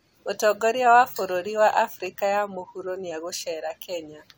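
Speech recording, with no technical faults to report. Nothing in it calls for a time or a cause.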